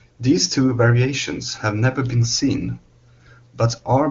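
No technical faults are audible.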